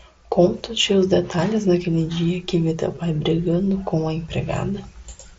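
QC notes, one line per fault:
2.95 s, concealed Bluetooth headset packet loss: a 15 ms hole in the speech is patched by repeating the best-matching stretch of the preceding waveform, so it registers as a brief buzz rather than a dropout, which fits two lost packets on the mSBC link.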